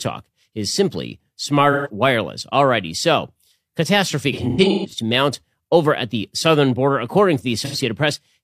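AAC frame loss with concealment: the decoder lost frames and patched the gaps from the last good spectrum. Speech smears into a phasey, noisy blur at 1.72 to 1.89 s, at 7.65 to 7.76 s, and across scattered dropouts from 4.32 to 4.94 s, the longest around 150 ms.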